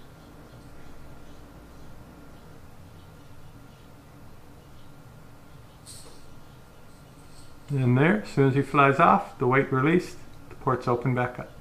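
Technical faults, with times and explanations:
Nothing stood out as a technical problem on listening.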